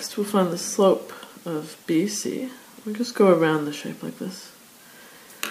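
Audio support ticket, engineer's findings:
Listened through and nothing turned up on my end; no dropouts, glitches or other faults to log for this one.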